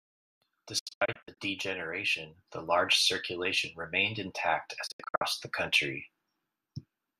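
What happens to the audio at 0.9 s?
The speech breaks into short, quickly faded silences from 0.79 to 1.38 s. This is a digital broadcast dropout: the receiver muted failed frames, losing that sound.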